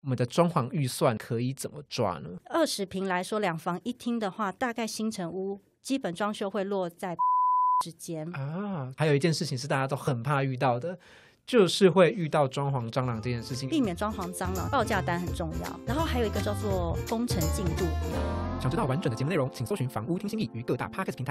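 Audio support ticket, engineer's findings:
Damaged data in compressed stream, brief blips at 2.38 s, 7.19 s and 10.07 s. Decoder path: corrupted bytes make frames unreadable, so the decoder loses sync and resyncs at the next frame header. Each glitch is very short.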